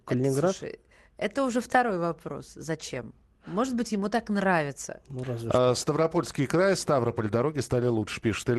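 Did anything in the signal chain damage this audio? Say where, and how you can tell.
No, nothing in the signal chain stood out on listening, and the speech comes through the call path with its bandwidth reaching up to about 12 kHz, as expected for that route.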